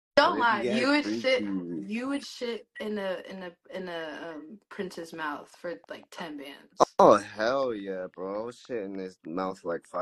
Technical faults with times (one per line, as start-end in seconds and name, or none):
none